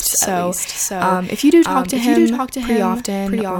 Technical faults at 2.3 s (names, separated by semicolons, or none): doubled audio track